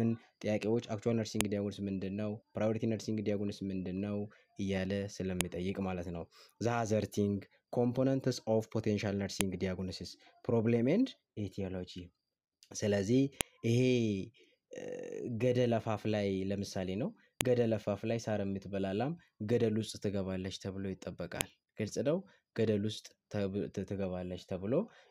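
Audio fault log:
1.41, 5.41, 9.41, 13.41, 17.41 and 21.41 s: file header played as audio. A sharp, loud click every 4 s, regardless of the surrounding sound. The audio was joined from 4-second WAV pieces whose header bytes were left in and played back as samples.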